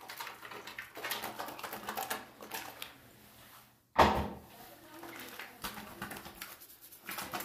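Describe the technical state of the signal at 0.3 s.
At 0.3 s the signal is intact, with no dropout, distortion or other technical fault.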